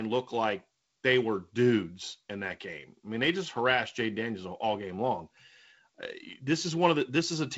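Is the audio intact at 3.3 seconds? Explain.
No. At 3.3 seconds the speech is caught up in a block size mismatch (truncated) that runs through the whole clip. One stage writes blocks longer than the next stage reads, so the tail of every block gets thrown away. That chop repeats at about 43.1 Hz, which fits 1024-sample blocks, and you hear it as a steady low buzz under the speech. The pace stays essentially normal. The wideband telephone band, topping out around 7 kHz or a little above, comes through as expected.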